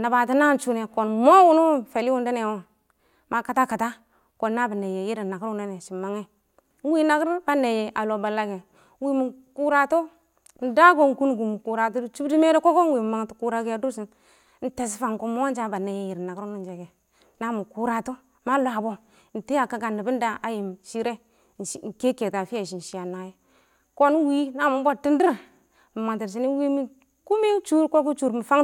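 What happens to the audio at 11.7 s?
Nothing goes wrong at 11.7 s: the speech runs through that moment intact, with no dropout, click, glitch or other audible fault.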